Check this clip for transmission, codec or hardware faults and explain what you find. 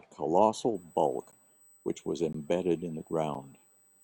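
Two faults are present: a USB whine and gaps between stream segments.

USB whine runs from 0.75 s to the end. Current drawn by the USB bus in 125-microsecond microframes is getting into the audio path through the shared power or ground. That periodic load shows up as a steady, fixed-pitch tone at 8 kHz. It sits roughly 35 dB below the speech, so it is heard as a thin high whine laid continuously under everything after it starts.

Gaps between stream segments occur at 1.31 s, 2.33 s and 3.34 s, one per second, which fits a stream cut into 1-second segments. At each boundary the time stamps of consecutive segments fail to meet, and the player fills the space with silence. The holes last 13.4 ms, 17.1 ms and 6.5 ms. No audio is lost, but each gap is a sharp-edged dropout that briefly chops the speech at a regular interval.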